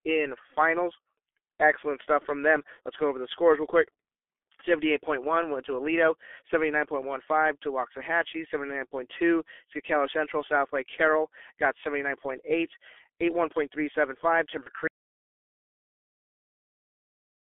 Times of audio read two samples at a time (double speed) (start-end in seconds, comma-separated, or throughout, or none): none